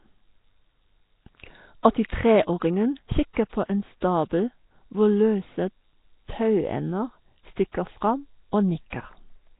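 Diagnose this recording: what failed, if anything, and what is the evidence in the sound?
Speech sounds hissy and smeared throughout, with nothing above 3.8 kHz. The likely cause is heavy Nellymoser compression at the codec stage, noise-filling bit-starved bands, consistent with a 16 kbps stream.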